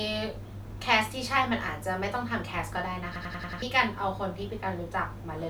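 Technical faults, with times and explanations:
3.16 to 3.62 s, system hang loop: the speech suddenly stutters, with one 93 ms slice repeating exactly five times at about 10.8 Hz, which fits a 4096-sample buffer. The system stalled while the hardware kept replaying its ring buffer, and roughly half a second of speech is lost.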